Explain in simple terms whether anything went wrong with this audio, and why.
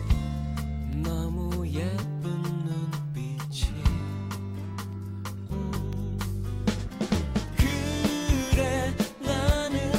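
Something in the system, likely a background task tying up the USB connection or the audio driver, briefly interrupted the audio about once every second. These are periodic USB or driver dropouts. Each time, a tiny sliver of audio, well under a millisecond, was lost and replaced with silence. You hear this as a regular tick, about ten in all, starting at 0.93 s and repeating every 1.0 s until about 9.94 s.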